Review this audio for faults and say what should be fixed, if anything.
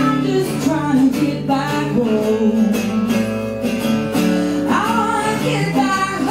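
Mains hum runs through the whole clip. It is a steady low tone at 60 Hz. It sits roughly 25 dB below the wanted sound. The power line is leaking into the signal path. A ground loop or a nearby transformer can cause this coupling. Fix it at the source rather than by filtering. To prevent it, use a single ground point and keep cables away from power supplies.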